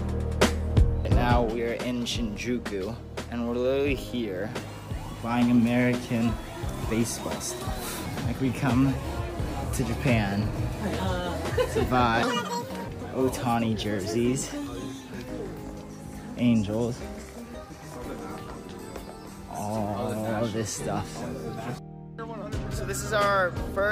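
Audio read two samples at a time (double speed) from 12.23 to 12.88 s: the reader grabs pairs of samples as single frames, so this stretch plays at 2x speed and jumps 12 semitones, an octave up.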